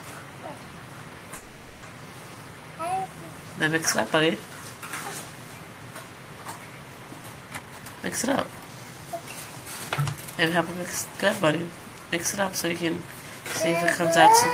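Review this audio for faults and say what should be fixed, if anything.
From 1.35 to 1.84 s the audio stalls, with a 0.47 s fading buzz filling the gap. This call audio freeze is likely an emptied jitter buffer from delayed packets. Nothing is lost, but playback runs 0.47 s later afterwards.

From 7.58 to 9.30 s a jitter buffer speed-up plays the audio at about 127% speed with unchanged pitch, trimming roughly half a second of pitch-period slices to shed accumulated delay.

Fixing the network path's packet delay variation, and letting the buffer shrink more gradually, would prevent both the stall and the audible hurrying.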